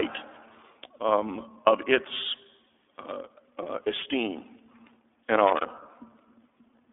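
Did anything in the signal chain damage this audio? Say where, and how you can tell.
Yes. Throughout the clip the speech sounds boxed-in and slightly rough and synthetic, with a telephone-like band running from about 300 Hz to 3.5 kHz and nothing above 3.7 kHz. This is iLBC codec damage at the codec stage, and it is plainly audible. The codec rebuilds each frame's excitation on its own, which gives the grainy texture, and the narrow band fits iLBC's 13.33 kbps mode with 30 ms frames.

From 5.47 to 5.66 s there is a short, irregular burst of crackle and scratching lasting about 0.2 s. This is loose connector crackle in the analogue wiring. A worn or dirty contact rapidly made and broke the circuit, chopping the signal on and off. Any DC present on the line turned each break into a pop, and together these produce the ragged crackle heard in that stretch.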